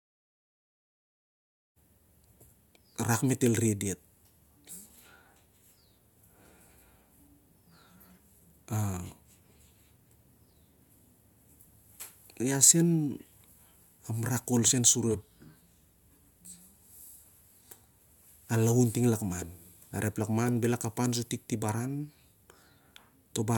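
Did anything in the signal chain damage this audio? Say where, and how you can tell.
No, nothing in the signal chain stood out on listening; the smooth fade-in that brings the speech up over roughly its first two seconds is an ordinary edit.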